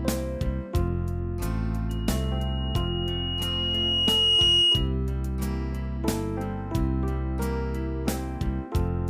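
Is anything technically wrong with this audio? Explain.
Yes, there's loudspeaker feedback squeal from 1.89 to 4.94 s. A mic is catching its own speaker, and at 2.9 kHz the loop gain tops one, so that single tone feeds on itself, swelling over about three seconds to roughly 10 dB above the rest of the sound.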